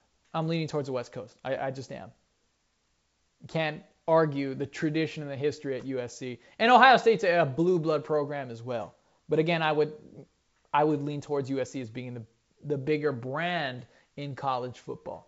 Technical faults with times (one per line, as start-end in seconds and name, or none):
none